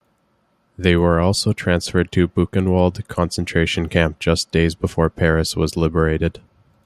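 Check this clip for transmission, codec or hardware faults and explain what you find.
No transmission, codec or hardware faults are audible anywhere in the speech.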